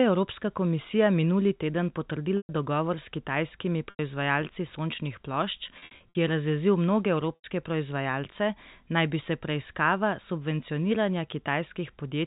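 Packet loss with pitch repetition: the receiver bridged missing audio by repeating the last pitch period, causing brief buzzy, held sounds at 2.38 s (120 ms, after "evropska komisija minuli teden"), 3.90 s (90 ms), 5.79 to 6.15 s (scattered gaps, after "sončnih plošč") and 7.35 s (90 ms).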